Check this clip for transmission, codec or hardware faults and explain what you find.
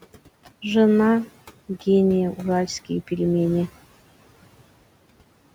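One processing fault runs through the whole clip. Noise suppressor artifacts: the suppressor pulls steady background bands down by about 17 dB between phrases, so the room noise, about 19 dB below the speech, pumps under speech.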